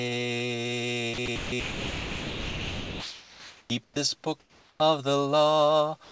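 At 1.14–1.18 s, 1.26–1.28 s and 1.36–1.52 s the sound cuts out briefly, then from 1.60 to 3.70 s it gives way to steady, even noise. This is most likely sound dropped by the voice detector, which mistook live sound for background and stopped sending. Unlike ordinary comfort noise, real content is lost here, not just room tone. Between 3.84–3.96 s and 4.40–4.80 s only the background changes: likely comfort noise in place of the background, about 5 dB quieter and flat in texture. The real background returns when sound resumes. A final short dropout hits 6.04–6.12 s, right at the clip's end.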